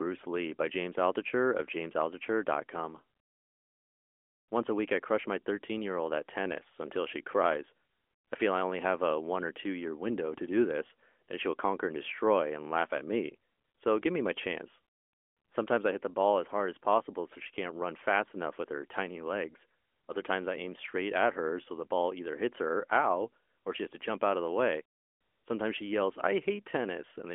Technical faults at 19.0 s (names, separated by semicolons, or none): none